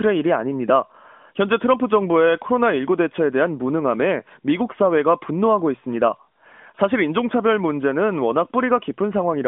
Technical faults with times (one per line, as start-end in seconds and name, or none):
none